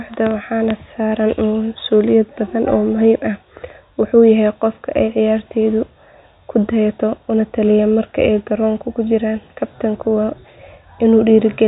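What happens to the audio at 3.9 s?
Nothing goes wrong at 3.9 s: the speech carries on through that moment without a dropout, glitch or other fault.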